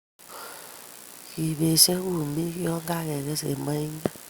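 No technical faults can be heard anywhere in the speech.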